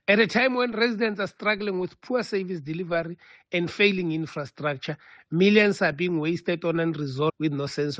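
At 7.28 to 7.30 s the audio jumps abruptly forward, with a brief blip marking the join as the sound picks up at a later point rather than continuing where it left off. This is a stream segment skipped, and the likely cause is a segment of the segmented stream that failed to load, so the player moved directly to the next one. The material in the missing segment is simply absent, leaving a discontinuity in the sound.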